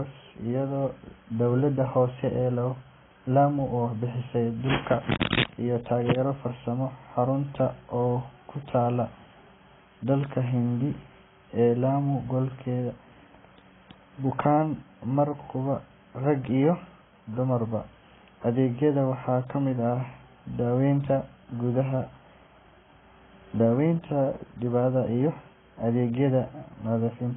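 From start to finish the speech sounds dull and smeared, with nothing above about 3.8 kHz and a warbly, fizzy texture on sustained sounds and sibilants. This is likely heavy AAC compression, pointing to AAC-LC at a bitrate around 16 kbps.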